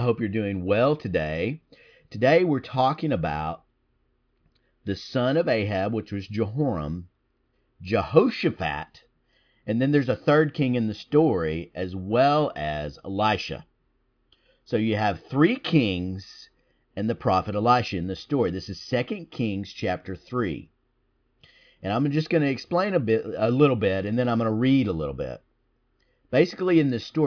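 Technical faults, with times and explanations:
Nothing in this speech recording stood out as a technical problem on listening.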